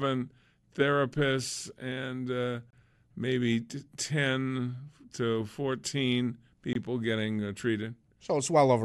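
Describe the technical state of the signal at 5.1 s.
At 5.1 s the speech signal is intact, with no audible technical fault at that moment.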